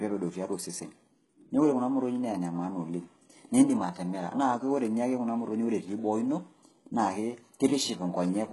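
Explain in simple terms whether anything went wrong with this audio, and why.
Something did go wrong, and it lasts the whole speech clip. The treble sounds false: s sounds come out gritty, metallic or lispy, and nothing at all is present above about 11.5 kHz. The likely cause is heavy HE-AAC compression, which stores only the lower part of the sound and fills in the top by copying lower bands upward. A plain treble cut would just sound dull. Here the top end is present but synthetic.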